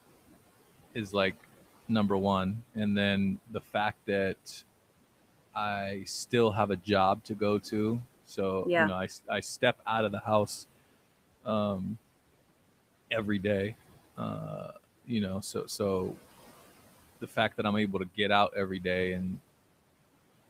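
Throughout the clip the background sinks between phrases and swells back under the speech. These are noise suppressor artifacts: the suppressor pushes the steady room noise, which sits about 19 dB below the speech, down by about 17 dB, frame by frame.

From 3.47 to 3.75 s, after "number one and then", and from 17.21 to 17.59 s, before "i'm able to get", brief bits turn faint and swallowed, dipping about 14 dB and about 11 dB. This is speech cut by the noise suppressor, which mistook quiet speech for noise.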